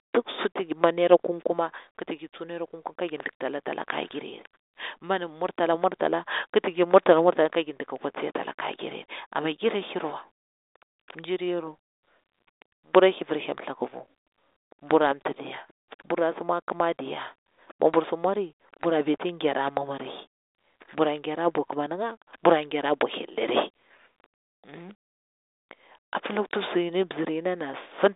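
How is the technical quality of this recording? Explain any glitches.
No glitches are audible: the speech is a telephone-band G.726 ADPCM signal at 40 kbit/s, held to roughly 300 Hz to 3.7 kHz with nothing above 3.8 kHz, and its coding noise is faint at most.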